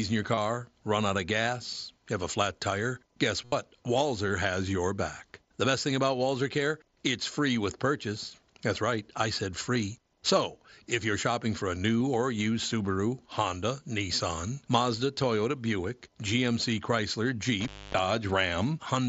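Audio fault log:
0.35–0.37, 3.45–3.52, 9.75 and 12.00 s, concealed Bluetooth headset packet loss: lost stretches of 7.5 to 75 ms, the first between "in your" and "run out of gas", the 9.75 s one after "right I said", and the 12.00 s one between "you're shopping for a" and "or used". The gaps are filled by repeating the best-matching piece of recent waveform, so the short ones are nearly hidden. The 75 ms run at 3.45 s holds a buzzy tone at full level and warbles as real audio returns, which sets it apart from a dropout into silence.
17.61–17.99 s, intermittent contact: the line opens for about 270 ms, with crackle at the edges where the contact breaks and remakes. Faint hiss remains while it is open. This is a true break in the signal, not the level-holding buzzy fill that concealment produces.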